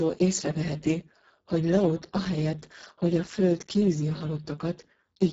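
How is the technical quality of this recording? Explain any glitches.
The recording is heavily degraded by codec damage throughout.

Speex codec, throughout the clip: the speech has been squeezed through this CELP coder with very few bits left for the excitation, which fits a setting near 6 kbps. Voices sound hoarse and noisy, and nothing is present above 7.7 kHz.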